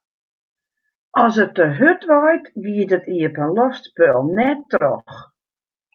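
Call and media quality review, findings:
Repeated stalls (stutter), 4.03 to 5.09 s: packets arriving late or slower than playout, jitter buffer draining nine times. Receiver extends the last sound to cover each gap, longest 70 ms, fading it on longer waits. About 175 ms filled, 17% of the span, nothing dropped. Audio drags and stutters through that span.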